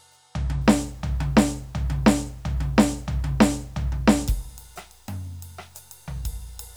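A music clip with low bit depth without dither from 0.61 s to the end. Grainy distortion follows the signal, about 40 dB down, and quiet sounds turn gritty. The waveform looks stair-stepped, and the spectrogram shows signal-correlated harmonic clutter. This likely comes from truncation to about 9 bits.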